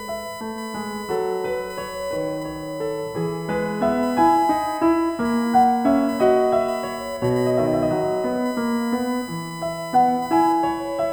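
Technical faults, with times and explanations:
Throughout, USB whine: there's a steady, fixed-pitch tone at 1 kHz sitting under the music, and it's strongest right at that fundamental, about 15 dB below the programme. That pitch comes from the bus drawing current in 1 ms frames. The pulsing leaks in through the power or ground and lands in the audio path as a constant whine that doesn't follow the music at all.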